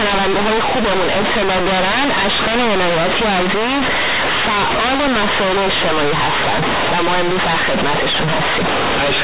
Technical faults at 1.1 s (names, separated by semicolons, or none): companded audio read as linear